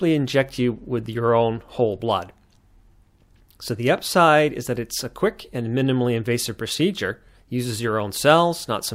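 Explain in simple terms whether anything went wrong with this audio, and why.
Nothing stood out on listening to this speech recording.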